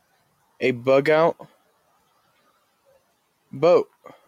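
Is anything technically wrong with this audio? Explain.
Yes. Sound cut by the noise suppressor, between 1.41 and 2.51 s: the suppressor mistook part of the sound for noise and pulled it down, by about 16 dB at the deepest, for roughly 400 ms in total. Steady and fading parts sink or end early.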